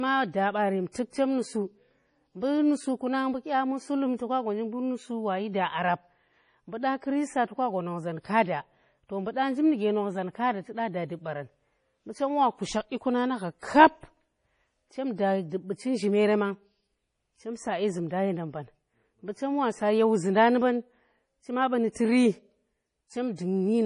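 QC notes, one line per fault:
throughout, MP3 compression: The audio was likely squeezed through an MP3 encoder starved of bits, and the heavy damage fits a bitrate around 32 kbps. With so little to spend, the encoder discards everything above about 10.5 kHz and drops weak frequency lines that then flicker in and out between frames. The speech sounds dull and watery, with a swirling, metallic shimmer on sibilants and consonant onsets that smear instead of landing crisply.
13.59–13.63 s, pre-echo: A sharp attack lands late inside a coding block. The encoder sizes its quantisation noise for the loud part and spreads it across the whole block, so that noise also fills the quiet stretch just before the attack. The result is a short hiss lasting about 35 ms ahead of the onset, which makes the attack sound softened and blurred rather than sudden.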